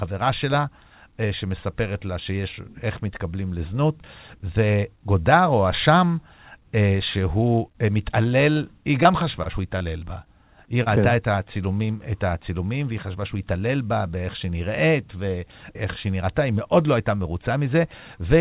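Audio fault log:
7.72–7.77 s, short stall from a late packet: a packet showed up late, the jitter buffer ran dry, and the receiver held the last bit of sound for about 26 ms until the data arrived, then carried on from the same spot. Nothing actually goes missing, but that held sound comes out slightly stretched with a faint buzzy smear. The audio is already capped at 4 kHz, which fits a G.711-style narrowband call path.
8.53–10.88 s, scattered short gaps: across these couple of seconds, roughly seven packets were lost or late, one here, one there, with the longest hole around 30 ms. Each time the receiver papered over the hole by continuing the previous sound, so around 7% of the stretch is patched-in filler. You hear it as brief ticks and little hiccups dotted through the speech, while the audio between them stays clear.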